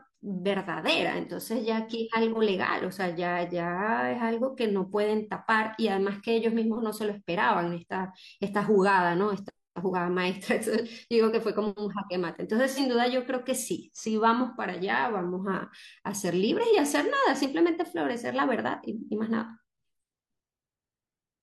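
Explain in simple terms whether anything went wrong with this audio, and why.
At 12.71 to 12.79 seconds the speech briefly turns smeared and noisy. This is AAC frame loss with concealment: a chunk of audio went missing, and the player guessed it from the preceding sound. The gap of about 43 ms fits a single lost frame. Unlike a dropout, it never falls silent.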